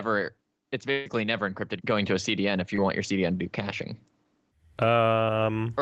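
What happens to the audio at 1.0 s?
A burst of packet loss strikes from 0.91 to 1.08 s. A run of packets arrived too late or not at all, so the receiver stretched and faded the last sound across about 140 ms, then jumped ahead to "never encrypted going to" with that stretch missing.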